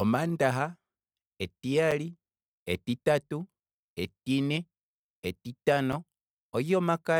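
At 1.91 s and again at 5.92 s, the speech drops out for about 7 ms. This is a gap between chunks. The audio fits 2-second chunks, and silence sits at these joins. Nothing is lost, but each join leaves a brief hole.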